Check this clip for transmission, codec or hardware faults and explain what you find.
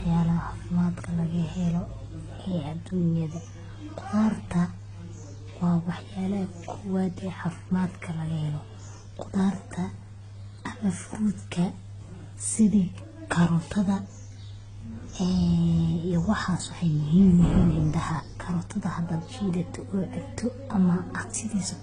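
One codec fault runs through the whole speech clip. Transcoding between lossy codecs, throughout: several codec stages have likely been stacked, each adding its own artefacts on top of the last. Nothing remains above 9.7 kHz, and the layered coding noise points to a low-rate HE-AAC stage followed by AAC-LC and Opus at modest bitrates.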